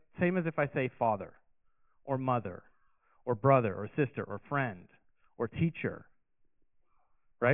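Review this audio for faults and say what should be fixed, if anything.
Nothing here needs fixing, since no technical faults turn up anywhere in this speech recording.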